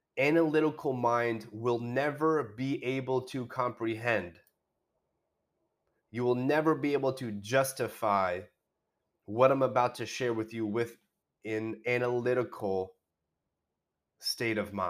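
Listening to the speech in this recording, nothing stood out as a technical fault at any point.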